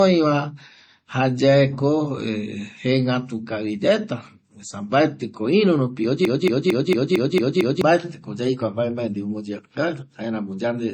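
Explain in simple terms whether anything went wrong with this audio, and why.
Two things went wrong with this speech recording.

The first runs through the whole clip: low-bitrate audio saved at a high bitrate. The sound is dull and swirly, with a smeared, watery quality on consonants. That likely comes from the recording first being squeezed hard into a small MP3 and later resaved as a larger MP3. Saving it bigger cannot bring back the detail the first squeeze threw away, so the damage stays.

The second is a broken-record loop from 6.25 s to 7.81 s. The same fragment, a little under a quarter of a second long, plays seven times back to back, giving a stuttering, stuck sound. The likely cause is a player or stream stalling and repeating the last piece it held. Whatever should have been heard in those one and a half seconds is missing.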